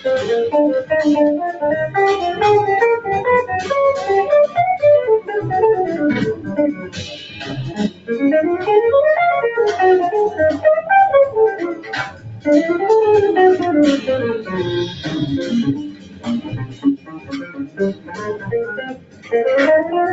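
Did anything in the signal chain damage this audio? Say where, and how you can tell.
Yes. The damage comes from the call-processing stage, where a noise suppressor applied to music or sounds stayed active. Sustained material and tails keep getting pulled down by roughly 15 dB while onsets pass, so the sound pumps and thins. On a waveform the envelope sags between attacks, and a spectrogram shows held partials fading early, all band-limited at 8 kHz by the call path.

The suppressor also made distinct cuts to the sound at 6.34–6.53 s (about 10 dB), 6.73–8.1 s (about 17 dB), 11.74–12.46 s (about 14 dB), 14.87–15.12 s (about 7 dB), and 15.76–19.33 s (about 17 dB). Each appears as a drop in level on the spectrogram and a sagging waveform envelope. In each case the suppressor mistook the sound for noise.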